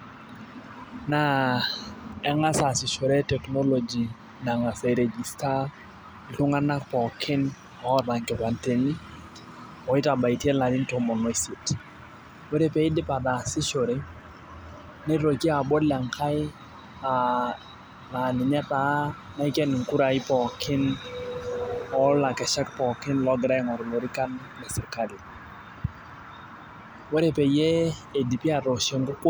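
Speech, carrying three sharp single clicks at 11.8 s (just after "tomon oisiet"), 12.92 s (just after "ore pee") and 14.21 s. Each is a brief step in the waveform that shows as a thin vertical line across the spectrum, with no audible gap in the sound. The likely cause is dropped samples: a fraction of a millisecond of the stream went missing, so the signal jumped straight to a later value.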